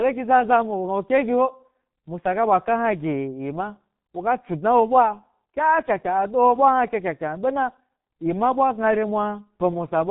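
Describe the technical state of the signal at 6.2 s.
At 6.2 s, as across the whole recording, the speech passes through the G.723.1 codec, coding it in coarse 30 ms frames at a rate that fits its 6.3 kbit/s mode. Nothing above 3.8 kHz survives, so the sound is muffled and hoarse, with smeared consonants.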